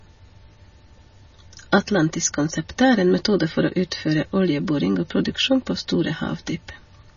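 Throughout, the speech has nothing above 6.9 kHz and sounds watery and swirly, likely from heavy MP3 compression at a low bitrate, around 24 kbps, cutting treble and flickering weak frequency lines.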